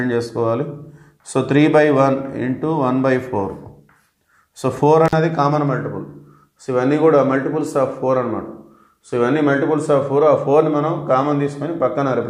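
At 5.05 to 5.13 s, an intermittent contact briefly opens the line for about 46 ms, dropping the sound out with crackle at both edges and faint hiss between.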